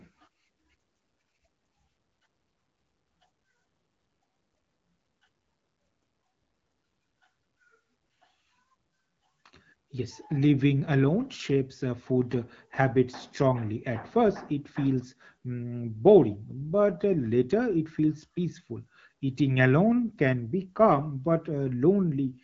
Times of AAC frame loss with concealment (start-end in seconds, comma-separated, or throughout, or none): none